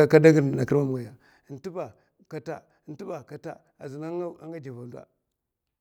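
A level cut of about 20 dB was applied in unsmoothed steps, roughly fifty a second, causing zipper noise from 0.78 to 1.6 s: a fast ticking riding on the speech.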